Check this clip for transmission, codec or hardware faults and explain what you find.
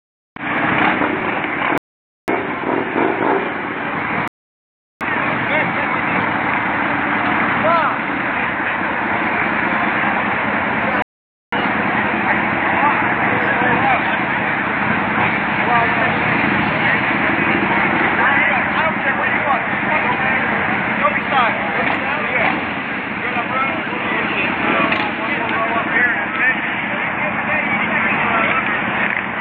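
Three rebuffering stalls show up, at 1.78 to 2.28 s, 4.28 to 5.01 s and 11.02 to 11.53 s. Each time the player drains its downloaded audio and just waits for more data, so the sound drops to silence, then picks up exactly where it left off. Nothing goes missing; the gaps simply add time, about half a second for the first and third and roughly 0.73 s for the second.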